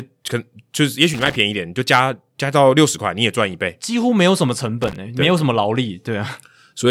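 Loose connector crackle at 1.14 to 1.36 s and again at 4.82 to 4.96 s: a worn contact intermittently breaks, chopping the speech into short irregular bursts of scratchy crackle.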